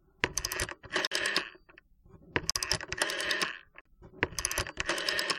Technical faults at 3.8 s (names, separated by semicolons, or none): block of digital silence